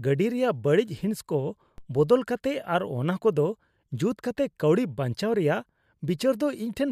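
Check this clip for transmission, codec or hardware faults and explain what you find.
One hardware-type fault is present: a single DC step at 1.78 s. At that instant the waveform's zero line jumps by about -34 dBFS, the sort of shift a converter recalibrating or an offset input being switched in would produce. The offset then drains away through what behaves like a 5 Hz high-pass, so the baseline settles back within a fraction of a second. It is heard as one brief low thump, with the speech continuing unchanged across it.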